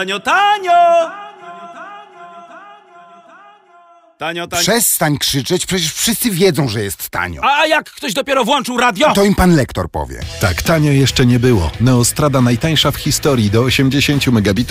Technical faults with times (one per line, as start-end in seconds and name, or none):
none